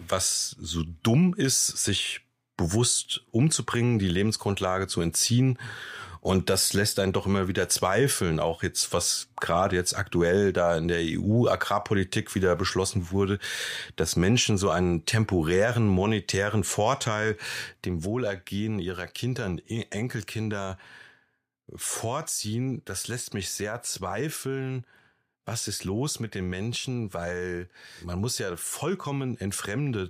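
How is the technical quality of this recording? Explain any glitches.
There's one real glitch here, and it's a level drop rather than a click or dropout of the whole signal. From about 17.85 s right through to the end, the speech falls by about 6 dB, abruptly, and stays down. That pattern points to one channel drops out: one side of a stereo recording likely went missing, so once the two sides are summed to mono, the shared speech lands at half level and anything carried only on the lost side vanishes.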